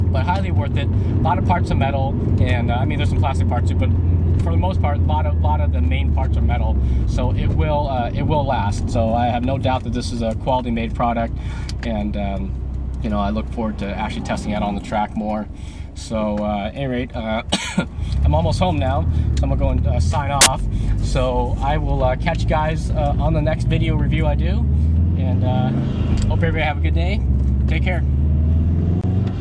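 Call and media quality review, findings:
File tags played as audio, 20.41 to 20.46 s: 50 ms burst of very loud white noise, hard on/off edges. Probable component: decoder/demuxer reading an embedded cover picture as samples; compressed image data decodes as noise-like values.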